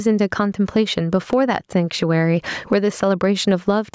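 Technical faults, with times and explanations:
Throughout: gain pumping. The level keeps breathing with the speech. Each time the talker gets loud, the level gets pulled down, with the gain swinging by something like 15 dB. Loud and quiet syllables end up squashed close together. That's likely the mic gain set far too hot, with a fast limiter or compressor yanking it back on every peak. The call-style band-limiting, nothing above 8 kHz, is just the normal call processing.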